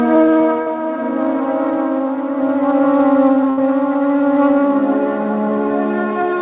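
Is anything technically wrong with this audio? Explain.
Yes, the music has two packet-loss faults, heard through a call path that carries nothing above 4 kHz.

Short concealed packet loss, 0.62 to 0.68 s: about 40 ms arrived too late. The receiver stretched the preceding sound to cover it, leaving a brief smear.

Burst of packet loss, 3.50 to 3.59 s: about 80 ms went missing. The receiver extended the last sound while fading it down, then the music resumes with that stretch gone.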